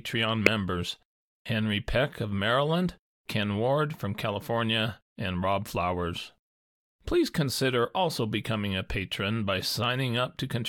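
At 0.46 s a corrupt frame was decoded: flipped bits misplaced spectral energy across what sounds like a few frames, producing a brief, loud chirp or burst of noise peaking around -5 dBFS.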